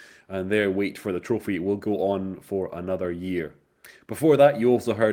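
Nothing in this bit of speech stands out as a technical fault, with no glitches, dropouts or odd artefacts turning up anywhere along the way.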